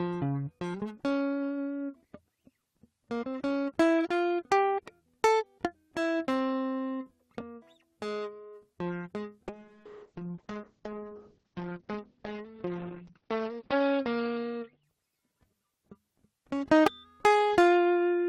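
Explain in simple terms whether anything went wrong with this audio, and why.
A call bitrate drop hits the music from 9.49 to 15.15 s. The connection had to send much less detail, so the sound turns rough and muffled, losing everything above about 6 kHz, then recovers. Unlike packet loss, the sound never cuts out.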